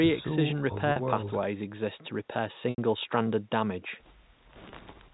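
Packet loss with pitch repetition occurs three times. At 0.92 to 0.96 s about 40 ms of audio went missing, which fits two lost packets, and the receiver filled the hole by replaying the last pitch cycle, so the speech briefly holds on a buzzy note. The 80 ms gap at 2.70 to 2.78 s runs long enough for that repeat to fade toward silence before speech returns. The 20 ms gap at 4.70 to 4.72 s is a brief, slightly held blip.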